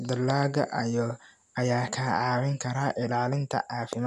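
The speech contains no audible technical faults.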